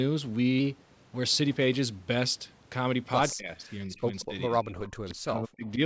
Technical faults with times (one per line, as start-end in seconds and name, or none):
3.32-5.80 speech suppressed in double talk
4.20-4.25 echo leak
4.84-5.14 echo leak